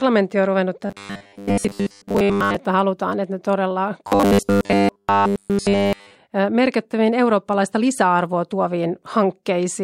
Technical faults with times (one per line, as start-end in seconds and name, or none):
0.87-2.57 robotic sound from repeated short buffers
4.08-6.16 robotic sound from repeated short buffers